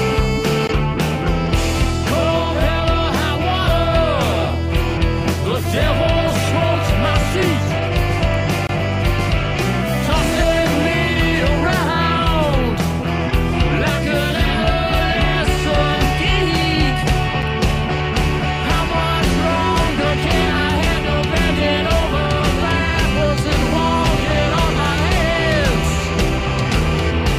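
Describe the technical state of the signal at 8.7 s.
A gap at a join of encoded pieces runs from 8.67 to 8.69 s: a 22 ms gap with smeared edges, left by untrimmed encoder delay and padding where separately encoded pieces meet.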